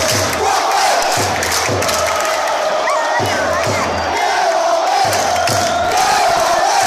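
Processor overload crackle, 5.84–6.60 s: dozens of sub-millisecond buffers miss deadlines and drop to silence, heard as gritty tearing, seen as waveform notches and vertical spectrogram streaks.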